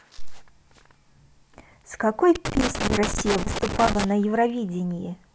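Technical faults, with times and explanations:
2.35–4.04 s, loose connector crackle: irregular scratchy crackling across the speech as a worn contact makes and breaks, chopping the signal.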